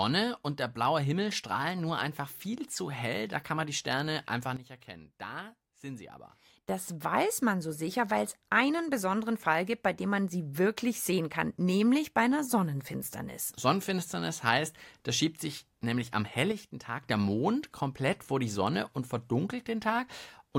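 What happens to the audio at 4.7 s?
At 4.57 s the level drops abruptly by about 12 dB, a sudden gain jump, and it stays down until 6.69 s, when it snaps back. The speech and the background noise fall and return together, with no fade on either edge, so you hear the whole sound step down and then up again. The likely cause is a digital gain change applied without a ramp, such as a setting change or bit shift landing between two samples.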